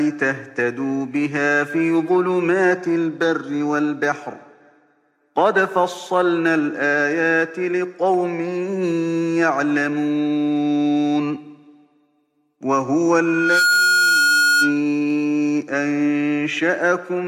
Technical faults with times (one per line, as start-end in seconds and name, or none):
13.20-14.83 loudspeaker feedback squeal